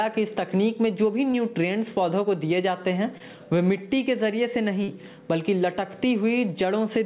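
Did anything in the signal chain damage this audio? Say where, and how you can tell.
Yes. Short concealed packet loss on the network side: brief smeared patches at 1.32–1.36 s, 3.18–3.22 s and 4.84–4.90 s, where 20–40 ms of lost audio was papered over by extending the preceding sound.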